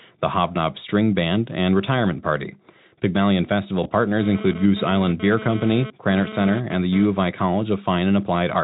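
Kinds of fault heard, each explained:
VoIP packet loss concealed by the speech codec: one lost 20 ms frame was filled by extrapolation, leaving a brief stretched, fading sound from 3.83 to 3.91 s.
GSM phone buzz: a nearby 2G phone's data bursts, about 217 per second, were rectified into the audio, giving an intermittent raspy buzz about 13 dB below the speech from 4.21 to 7.06 s, just before "of I".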